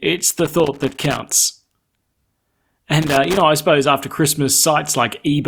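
An irregular burst of crackle and scratching cuts into the speech from 0.30 to 1.19 s, then returns more briefly from 3.02 to 3.41 s. This is loose connector crackle: a worn or dirty contact somewhere in the cable path keeps losing and regaining connection as it shifts, so the signal is chopped on and off many times in quick succession, and any DC on the line turns each break into a pop.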